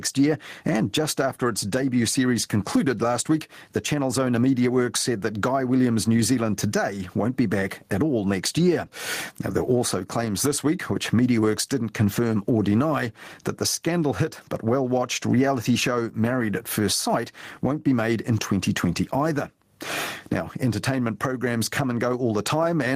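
Speech throughout shows gain pumping, the gain swinging around 15 dB and ducking under each loud sound, likely from excessive gain plus fast limiting; the waveform looks flattened.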